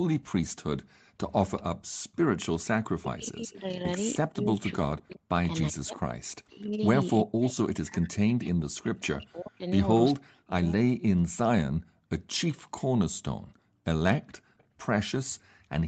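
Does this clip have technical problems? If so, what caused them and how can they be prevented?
Yes. An echo leak, likely from a far-end echo canceller that left some loudspeaker pickup in its microphone signal, returns a faint delayed copy of the speech 385 ms late. It sits about 30 to 35 dB below the speech, in brief scraps at 1.57 to 1.62 s and 14.58 to 14.64 s. Using a headset, or tuning the canceller's delay estimate and residual suppression, prevents this.

Speech suppressed in double talk shows up between 1.76 and 10.71 s, likely because the echo canceller mistook overlapping talk for echo and attenuated both. The speech dips and drops out in pieces, by as much as about 40 dB, for about five seconds in total. A canceller with better double-talk detection and less aggressive suppression prevents this.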